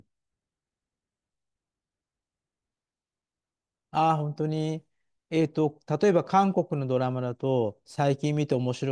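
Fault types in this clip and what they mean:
No fault types can be heard in this clip.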